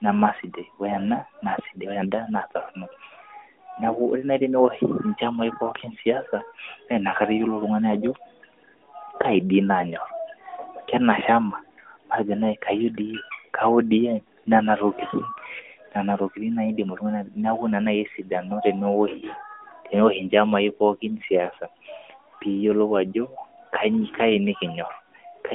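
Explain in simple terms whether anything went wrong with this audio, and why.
Nothing went wrong with this audio: no faults can be heard anywhere in the recording.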